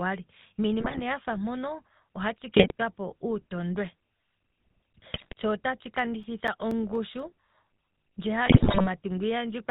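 Throughout, the speech carries the sound of the GSM full-rate codec at 13 kbps. The codec rebuilds the voice from a vocal-tract filter driven by a sparse, regularly spaced pulse excitation, and it passes nothing above 4 kHz. The damage is plainly audible: the voice has a dull, band-limited top and a buzzy, gravelly roughness where the coarse excitation stands in for the real glottal signal.

GSM bit errors first break through from 0.80 to 1.01 s, where the voice turns into squawks and gargling for about a fifth of a second. This fits corrupted filter, pitch and gain values reaching the decoder over a run of frames at a bit error rate of roughly 4 percent. The same disruption returns from 2.56 to 2.72 s, just after "yatya ngano ohatshi", and again from 5.14 to 5.33 s, just before "tsho otatshi". Each burst bends the spectrum and makes the level jump over eight to ten frames.

After "tsho otatshi", between 5.99 and 7.20 s, CD scratch ticks appear. 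There are six small ticks or brief dropouts, the longest lasting a few milliseconds. Each one marks a spot where a disc blemish destroyed more data than the error correction could rebuild, so the player interpolated over the bad samples or muted them. The ticks come at a steady rate of about five per second, once per turn of the disc.

The final and longest GSM bit error burst runs from 8.46 to 8.87 s. It covers roughly twice as many frames as the earlier ones, and its error rate is near 6 percent. The result is a sustained stretch of pops, squawks and gargled, level-jumping sound.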